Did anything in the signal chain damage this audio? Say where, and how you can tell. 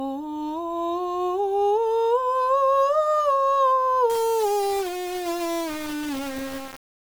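Yes. From 4.10 s to the end, the music turns grainy, with distortion tracking the signal. This points to low bit depth without dither, likely from a sample-format conversion rounding to 4 bits, leaving error roughly 15 dB below the music.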